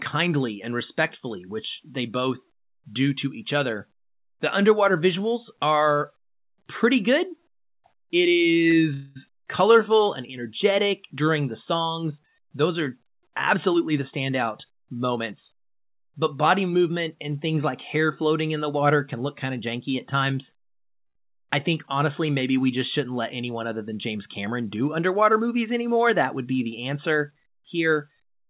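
What you've got here is speech over a call link, and it's narrowband: nothing above 4 kHz, which fits a G.711 A-law path. The faults cluster around packet timing. First, a short stall from a late packet at 8.70 to 8.74 s, where the receiver held the last sound for about 24 ms while waiting for a packet, then picked up exactly where it left off. Nothing's lost, it just drags with a slight buzz or dip. The same thing happens at 21.06 to 21.17 s, right before "I think honestly maybe", with a longer 92 ms stretch. Right after the first stall there's a call audio freeze from 8.94 to 9.17 s. The sound smears into a fading buzz or hiss for about 218 ms without ever dropping to silence, then resumes intact. That's likely packets held up in transit draining the jitter buffer, and it leaves a gap inserted rather than audio missing. Later, the jitter buffer speeds things up to shed the built-up delay, at 13.55 to 15.49 s and again at 24.81 to 25.97 s. 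Both times it's running at 107% by snipping out tiny pitch-period slices, roughly 150 ms total in the first stretch and about 100 ms in the second. Pitch stays put, but the talker sounds a bit rushed there.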